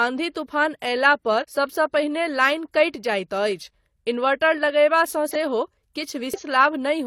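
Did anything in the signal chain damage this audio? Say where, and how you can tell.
Yes, at the codec stage: compressed frames skipped at 1.39–1.45 s, 5.31–5.36 s and 6.34–6.40 s. The speech jumps ahead by roughly 150, 40 and 200 ms, because whole frames were missing or refused by the decoder.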